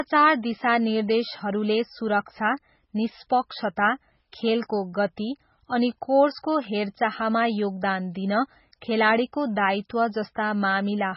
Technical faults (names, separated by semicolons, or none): MP3 compression